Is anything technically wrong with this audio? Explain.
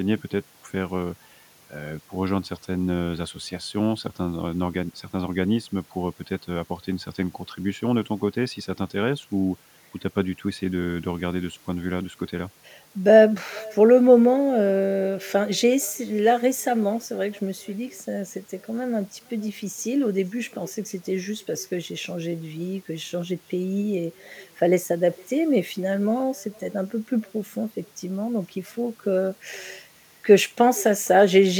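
Yes. An echo with no canceller runs throughout the speech. The far end is evidently playing the call over a loudspeaker, its microphone picks that playback up, and nothing subtracts it before it travels back. Every phrase therefore returns roughly half a second later as a faint copy, about 27 dB below the direct sound, thinner than the original, trailing behind each utterance like a distant shadow.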